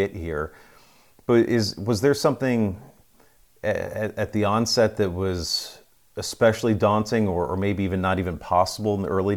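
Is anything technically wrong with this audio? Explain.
No, nothing technically wrong here.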